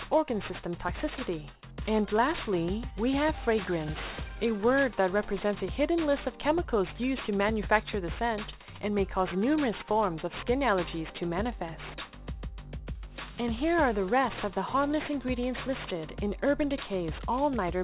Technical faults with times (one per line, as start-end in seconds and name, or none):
0.00-17.84 aliasing